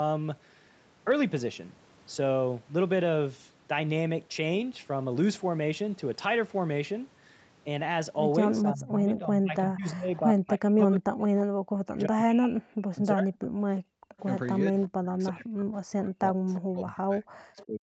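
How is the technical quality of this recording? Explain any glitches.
The recording has clear call-processing faults in its second half, mainly from a struggling echo canceller.

From 8.62 to 11.24 s, 11.79 to 13.32 s, and 14.64 s to the end, the voice repeatedly sinks by roughly 40 dB. This is likely speech suppressed in double talk, with the loudspeaker side's voice ducked along with the echo.

From 13.42 to 14.2 s, a faint copy of the voice trails about 343 ms behind. Brief scraps recur at 14.81, 16.54 and 17.58 s, roughly 20 to 25 dB down. This is likely echo leak, where loudspeaker sound slipped past the canceller.

From 13.6 to 14.18 s, the room sound drops by about 40 dB, then returns. This is background gated by the echo canceller, which clamped the microphone during playback. The missing content above 8 kHz comes from normal call microphone processing.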